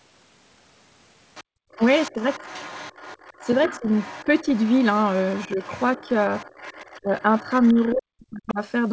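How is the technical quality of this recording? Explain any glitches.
The recording has clear echo-cancellation problems on a speakerphone-style call: a far-end voice leaks in, room sound is gated once, and the near talker's speech is repeatedly suppressed while both sides talk. The audio is band-limited to 8 kHz, which fits a wideband G.722 call at 64 kbps.

Other side's voice leaking through runs from 1.35 s to 7.95 s, with a further short burst at 8.48 to 8.53 s. A second voice sits underneath the main talker, roughly 20 dB down. The likely cause is the loudspeaker playback reaching the microphone and the echo canceller failing to subtract it fully, so residual echo passes to the far end.

Background gated by the echo canceller occurs between 1.44 s and 1.72 s. The room tone collapses by about 37 dB for around a third of a second, then comes back. This is the canceller's suppression stage clamping the microphone hard while loudspeaker energy is present, treating everything in the pickup as echo and muting it until the playback eases.

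Speech suppressed in double talk appears at 2.11 to 2.17 s, 3.8 to 4.48 s, 5.48 to 6.1 s, and 7.01 to 8.61 s. The first three are brief dips of around 10 dB or less, and the 5.48 s one is only a few dB. The last is severe, with the talker dropping by as much as 40 dB over about a second. This is likely the canceller failing to tell the local talker from the echo when both sides talk at once, so it attenuates both.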